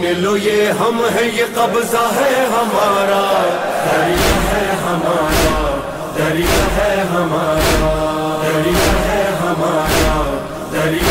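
Nothing in this audio stands out as a technical problem, so there's really nothing to flag here.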